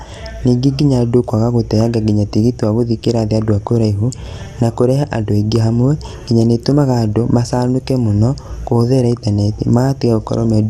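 MP2 compression affects the whole clip. The speech sounds dull and granular, with upper sub-bands starved of bits, likely from a low bitrate of about 80 kbps.

DAB burbling occurs at 3.63 s, between "gũthiĩ kĩrathi andũ a" and "kũraihu na kũrehe andũ". A brief disturbance appears as a small rate of bit errors, about 0.2%, corrupts the data across 6 frames, putting short blips of noise into single sub-bands.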